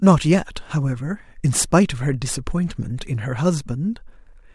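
Nothing goes wrong anywhere in this speech recording, so there's no technical fault to point to at any moment.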